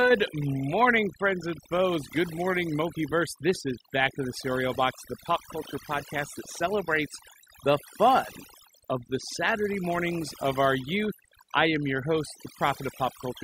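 Throughout, the background drops to near silence flecked with twinkling specks: overdone noise removal, suppressing bands near the noise estimate too aggressively.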